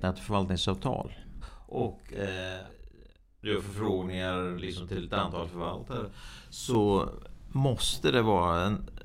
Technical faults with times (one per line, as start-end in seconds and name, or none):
1.48-6.75 channel delay (doubling)